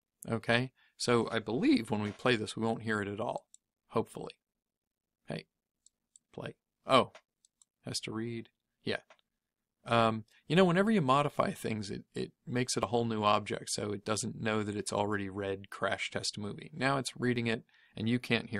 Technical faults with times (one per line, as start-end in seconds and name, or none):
12.83 dropped buffer (overrun)
17.36 dropped buffer (overrun)